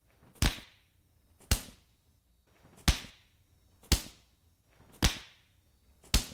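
Nothing technically wrong can be heard in this recording of sounds. No fault appears at any point in the audio.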